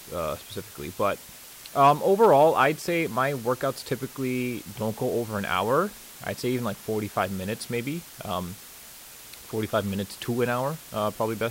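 From start to end, the speech carries low bit depth with dither: the samples have been rounded to about 6 bits, with a small random signal added first so the rounding error turns into steady white noise instead of distortion. The result is a constant, even hiss sitting roughly 20 dB below the speech. On a spectrogram it shows as a flat grey floor across all frequencies, and the waveform looks thickened by fuzz during pauses.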